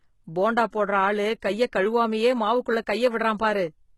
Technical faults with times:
0.00-3.97 HE-AAC compression

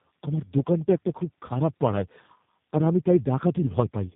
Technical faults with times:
0.00-4.16 tandem speech coding

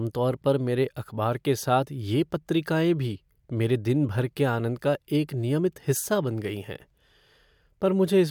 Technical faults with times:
none

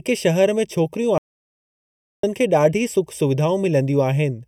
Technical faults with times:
0.00-4.48 channel delay (comb filtering)
1.18-2.23 audio dropout to silence

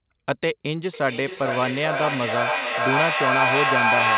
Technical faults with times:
0.94-4.17 feedback echo between two devices

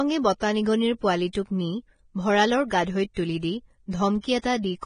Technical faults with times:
0.00-4.86 Vorbis compression
1.33-1.35 pre-echo
2.70 pre-echo
3.14-3.17 pre-echo
3.91-3.93 pre-echo
4.21-4.24 pre-echo

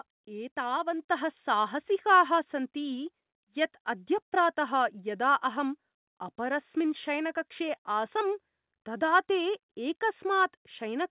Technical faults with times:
1.02 microphone volume stepped up

